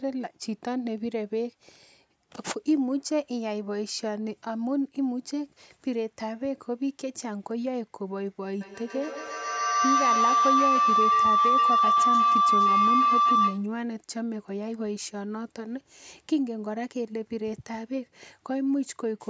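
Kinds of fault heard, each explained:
Feedback howl: two devices on the call in one room keep re-amplifying each other, so a tone near 1 kHz swells from 8.61 to 13.74 s. Its loop repeats about every 150 ms and it peaks about 6 dB above the speech, showing as a bright horizontal spectrogram line and a swelling waveform.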